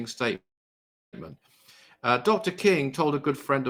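It's a speech clip with a call audio freeze from about 0.35 s to 1.15 s. The last bit of sound gets stretched into a short fading buzz, then drops to silence for roughly 0.7 s before the talk picks up right where it left off. Nothing seems lost; instead about 0.77 s of filler gets wedged in, so everything after runs that much late. Likely cause: packets held up in transit, letting the jitter buffer run dry.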